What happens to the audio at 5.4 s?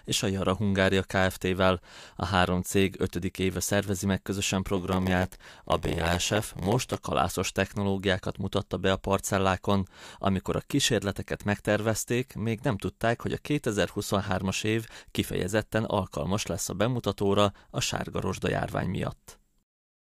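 At 5.4 s the speech has a block size mismatch (padded), running from 4.76 to 6.99 s, after "éve szervezi meg közösen". Zero-filled gaps, fitting a 512-sample read block, buzz at 86.1 Hz and slow the speech to 0.938 speed, at near-normal pitch. The waveform shows regular dropouts, and the spectrogram shows vertical stripes.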